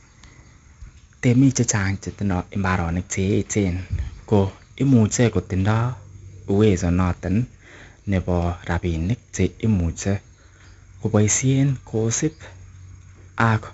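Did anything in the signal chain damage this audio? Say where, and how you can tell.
Yes, at the codec stage: 4-bit ADPCM compression leaves gritty, level-following hiss throughout, smeared attacks, and a spectrogram with nothing above 7.7 kHz, which fits a 64 kbps stream.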